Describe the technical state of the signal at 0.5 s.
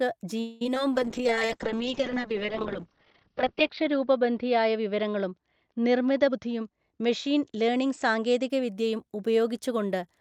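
A call audio freeze runs from 0.40 to 0.62 s: a fading buzzy smear of the last sound, likely from late packets emptying the jitter buffer, with nothing missing afterward.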